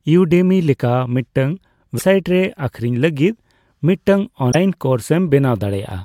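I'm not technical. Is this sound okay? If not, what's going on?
No. Two short stretches of this speech, at about 1.97 to 2.02 s and 4.51 to 4.55 s, suffer a likely broken MP3 bit reservoir: data went missing, so the sound skips ahead with a brief glitch.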